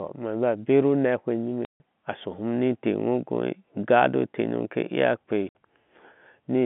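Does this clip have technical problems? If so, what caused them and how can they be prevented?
Yes, there's packet loss filled with silence: the speech drops out from 1.65 to 1.8 s and again from 5.49 to 5.55 s, with hard edges. Both gaps fit 30 ms packets that never arrived and were replaced with silence. A jitter buffer with proper loss concealment would hide them.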